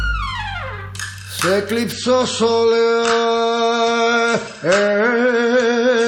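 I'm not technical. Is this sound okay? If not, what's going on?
No. From 1.92 s to the end there's an adaptive stream at a lower bitrate: the connection slowed, so the player switched to a smaller, lower-quality version of the audio. The change is sudden, with no gap, and everything above 8.3 kHz disappears, so the sound turns duller and grainy.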